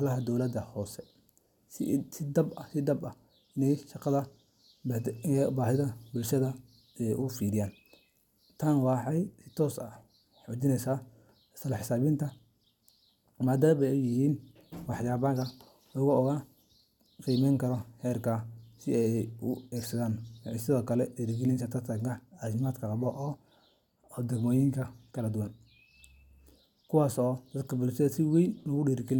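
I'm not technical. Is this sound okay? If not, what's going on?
Yes, no technical faults to report in this speech recording.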